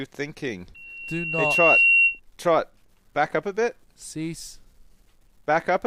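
Loudspeaker feedback squeal runs from 0.75 s to 2.2 s. A single tone near 2.7 kHz appears and swells over roughly a second until it sits around 10 dB above the rest of the sound, then stops. A microphone was picking up the loudspeaker it feeds, and at 2.7 kHz the gain around that loop exceeded one. Each pass reinforced that frequency, so it kept growing on its own.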